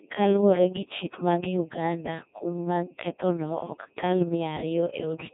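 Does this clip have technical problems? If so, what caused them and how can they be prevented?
Yes. Codec 2 vocoder damage runs throughout. The speech is rebuilt from sine waves, so it sounds robotic and buzzy. This fits about 1.6 kbit/s, with nothing above 3.8 kHz. Prevent it by sending speech through a higher-bitrate waveform codec instead.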